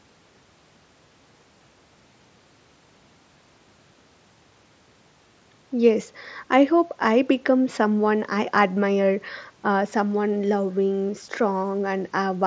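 No technical faults can be heard in this speech clip. The sound stops at about 8 kHz, as expected from call microphone processing and a wideband Bluetooth mSBC headset link, with only a light grain on the louder sounds.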